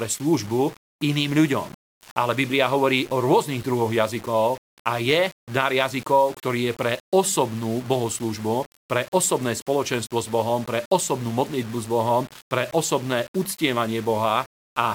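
From start to finish, the speech likely passed through a stage that reduced it to very few amplitude steps, consistent with about 6 bits, rounded without dither. Because the error tracks the waveform, it forms a grainy, signal-dependent distortion sitting roughly 20 dB below the speech. Quieter syllables and decaying word endings turn especially gritty, and the softest moments sputter or drop out as they fall between steps, so the roughness swells and shifts with every phrase.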